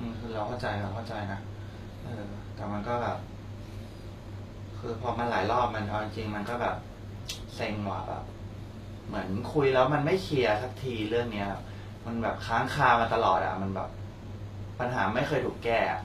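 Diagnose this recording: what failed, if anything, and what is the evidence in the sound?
Across the whole recording the treble sounds bright but synthetic, with s sounds turning gritty and lispy, and nothing at all above about 14.9 kHz. The codec stage likely failed: HE-AAC compression, at a rate that fits roughly 24 kbps, regenerates the upper band by spectral band replication, so its harmonics don't match the real voice.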